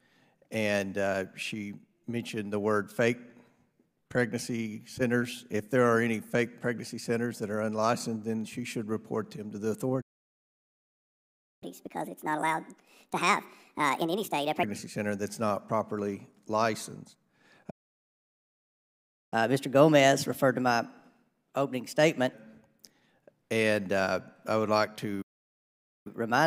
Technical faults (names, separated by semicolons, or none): playback stall; catch-up at higher speed